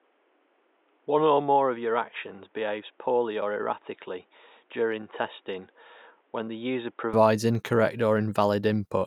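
From the start to 7.13 s, the input was likely switched to a poorer device passing nothing above 3.8 kHz. The speech sounds dull and boxy, about 5 dB quieter, over a faint noise floor some 40 dB down, then clears with no gap.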